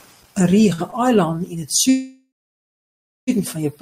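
From 0.51 to 0.95 s the speech shows repeated stalls (stutter). Four short holds, the longest about 48 ms and adding up to roughly 90 ms, break the flow. Each time, the receiver's jitter buffer ran dry and it briefly stretched the last sound until packets caught up. About a fifth of that stretch is filler, yet nothing is lost. Unlike a single freeze, it comes as a quick series of small hitches that make the speech drag.

From 1.90 to 3.30 s comes a call audio freeze: a single long hold of about 1.38 s. The last sound is carried on briefly and fades, then about 0.97 s of it is silence before the speech resumes exactly where it stopped. This is likely packets held up in transit, emptying the buffer. Because nothing is skipped, it differs from a dropout. The speech is simply pushed about 1.38 s later.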